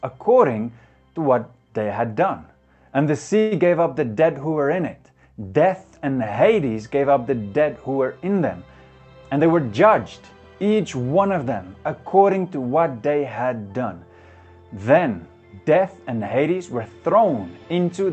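At 3.39 to 3.53 s there is a call audio freeze, likely from delayed packets draining the jitter buffer. The last sound is stretched into a fading buzz for about 120 ms before the audio resumes, with nothing lost. At 8.98 to 9.46 s and again at 16.78 to 17.23 s, a jitter buffer speed-up removes short pitch-period slices, roughly 70 ms each time. The audio runs about 12% fast at unchanged pitch and sounds hurried. The call path limits the bandwidth to 8 kHz throughout.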